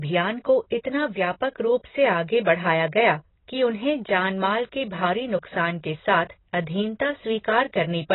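From start to finish the speech sounds dull and smeared, with nothing above 4 kHz and a warbling, fizzy texture on sibilants. This is likely heavy AAC compression, AAC-LC at a bitrate that fits around 16 kbps, quantising away high bands.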